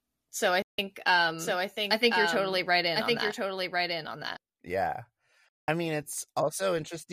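At 0.62 to 0.79 s the speech cuts to silence for 160 ms, a digital broadcast dropout where the receiver muted on failed frames. The waveform shows a flat gap and the spectrogram a blank vertical strip. From 1.39 to 4.37 s a doubled audio track appears: a full-band copy trails about a second behind, a few dB quieter, with no reverberant tail. It starts and stops abruptly, most likely from a second, slower capture path, and shows as repeated spectrogram patterns offset in time. A second dropout at 5.50 to 5.68 s leaves a similar clean, silent hole.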